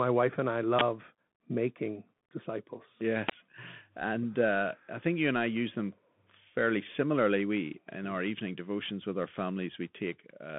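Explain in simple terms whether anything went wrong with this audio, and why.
Yes. The speech sounds thin and muffled all the way through, with nothing above about 3.8 kHz, scratchy s sounds, and a grainy hiss underneath. That is the Bluetooth CVSD headset codec, an old phone-quality format that squeezes sound into simple up-or-down steps and plainly damages it here.

There are also two loud bursts of digital noise, from 0.79 to 0.81 s and at 3.29 s. Each is an uninitialised buffer: the player sent out a block of leftover memory before real audio filled it. Their lengths fit blocks of 1024 and 512 samples.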